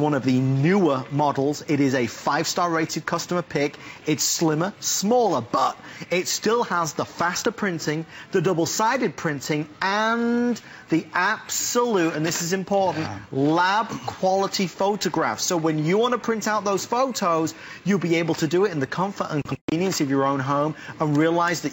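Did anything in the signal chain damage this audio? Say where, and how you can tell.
No, none of the stages from capture to playback audibly damaged this signal; its level, continuity and timing hold steady throughout.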